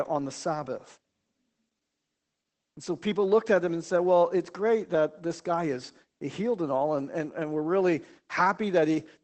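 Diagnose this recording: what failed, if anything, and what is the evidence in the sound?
The codec is the culprit: Opus voice compression across the whole clip. The speech has nothing above 8.5 kHz and sounds audibly muffled, hoarse and a bit robotic, which fits SILK running wideband at around 12 kbps and coding the excitation coarsely.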